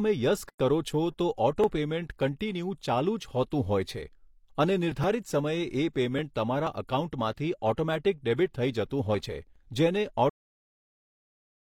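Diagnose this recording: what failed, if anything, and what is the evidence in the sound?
A gap at a join of encoded pieces opens at 0.49 s and lasts until 0.60 s, a gap of about 108 ms. This is a codec-stage fault: separately encoded pieces were joined untrimmed, leaving encoder start delay and last-frame padding between them, so the speech breaks off and resumes where it left off.

A cut-off end occurs at 10.30 s: the speech stops mid-sound and drops straight to digital silence with no decay. This points to the buffer or storage stage, where the final buffers were never written out, so the audio is truncated rather than finishing naturally.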